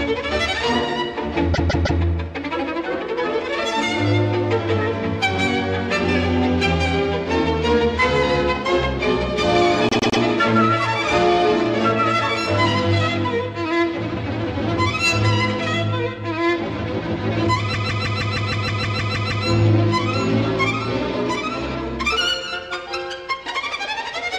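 Repeated frames: short blocks of compressed audio were replayed, so the sound stutters, looping about 157 ms three extra times at 1.53–2.0 s, 105 ms three extra times at 9.89–10.2 s, and 157 ms eleven extra times at 17.73–19.45 s.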